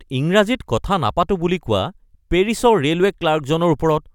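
No technical fault can be heard anywhere in the recording.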